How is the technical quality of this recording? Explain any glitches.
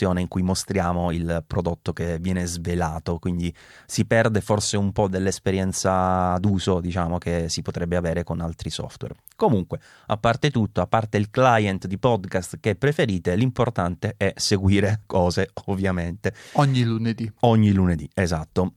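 No technical faults are audible.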